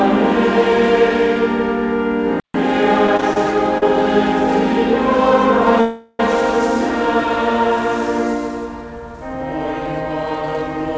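Audio carried over a call path whose top end stops at 8 kHz, which points to a wideband codec such as G.722, with four faults. A playback stall at 2.40–2.54 s cuts the sound to silence for about 143 ms before it resumes, likely because the player ran short of data. The silence is what separates it from a call freeze. Repeated stalls (stutter) at 3.07–3.37 s bring four short holds, the longest 26 ms, filling 71 ms with nothing lost. The audio drags unevenly rather than pausing once. A short stall from a late packet at 3.78–3.83 s holds one sound for 38 ms. It is a single brief stretch, not a cluster. A call audio freeze at 5.81–6.20 s stretches the last sound into a fading buzz or hiss for 381 ms without reaching silence. It then carries on where it stopped, most likely because packets were held up and the jitter buffer ran empty.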